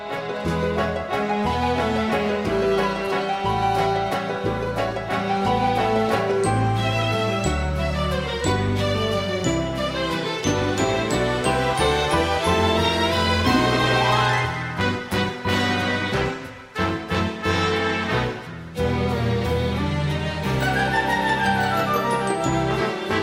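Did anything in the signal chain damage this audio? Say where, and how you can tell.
No, nothing in the signal chain left any audible damage on this recording. No stage between capture and playback leaves a mark that can be heard or pinned to a moment in the audio.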